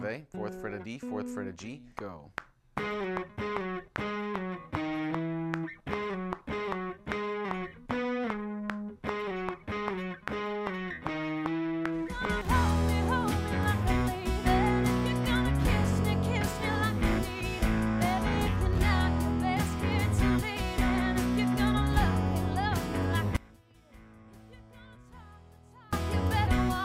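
The signal path likely lost its feed for about 2.56 s, from 23.36 to 25.93 s, while the downstream chain stayed live: an audio dropout to a faint residue. The sound cuts abruptly to a faint leak about 25 dB down, then snaps back.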